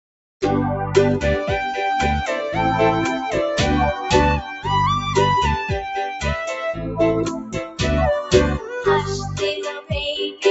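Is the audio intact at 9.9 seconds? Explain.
No. A noise suppressor designed for speech stayed active on this audio and treated its steady, sustained parts as noise, pulling them down by roughly 10 dB so that held sound and decaying tails pump and thin while sharper onsets pass through. From 9.57 to 9.91 s the suppressor mistook the sound for noise and cut it hardest, by as much as about 16 dB, so the audio sinks right up to the 9.9 s mark.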